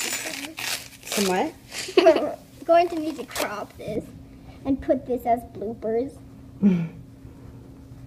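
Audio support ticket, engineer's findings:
De-emphasis applied wrongly, 3.96 s to end (8.07 s). Audio turns dull and muffled. Smooth treble roll-off, about 11 dB down at 10 kHz against 1 kHz. Probable component: de-emphasis filter engaged on unemphasised material, or applied twice.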